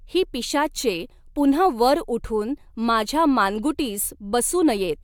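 Listening through the speech, nothing stood out as a technical problem at any point.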